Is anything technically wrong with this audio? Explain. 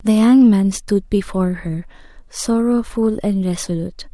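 No, nothing is technically wrong.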